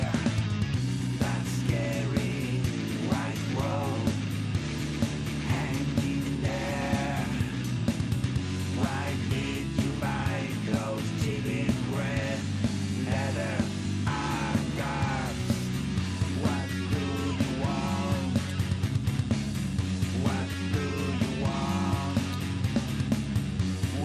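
No technical faults can be heard anywhere in this audio. There is nothing here that needs a time or a cause.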